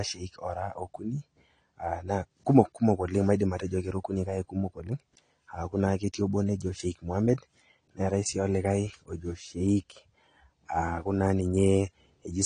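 Throughout the speech, the sound is dull and smeared, with nothing above 10 kHz and a fizzy, warbling edge on sibilants. This points to AAC compression at a low bitrate, likely AAC-LC near 32 kbps, discarding high bands and coarsely quantising what remains.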